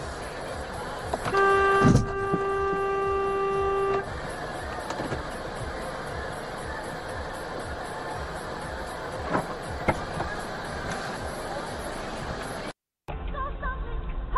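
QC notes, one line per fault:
No faults found on this pass; nothing to log.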